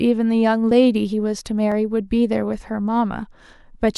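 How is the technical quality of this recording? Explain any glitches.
The speech has two brief glitches, at 0.71 s and 1.72 s. Each is likely a dropped buffer (overrun): about 10 ms of samples was overwritten before being read, so the audio skips ahead.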